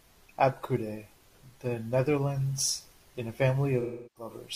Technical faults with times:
3.80-4.30 AAC frame loss with concealment

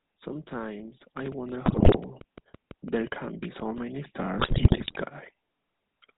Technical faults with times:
0.00-6.18 GSM full-rate codec
1.32-3.79 train of clicks
1.66-1.99 GSM bit errors
4.38-4.97 GSM bit errors

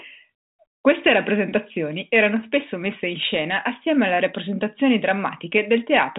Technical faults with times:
none

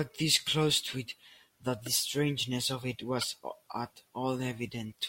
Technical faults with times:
3.19-3.24 corrupt frame decoded

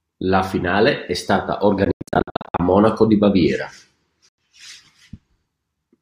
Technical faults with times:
1.85-2.60 Bluetooth dropout
4.29-4.38 Bluetooth dropout

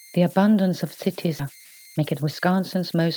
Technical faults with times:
0.00-3.16 converter idle tones
1.39-1.41 skip ahead
1.49-3.07 jitter buffer speed-up

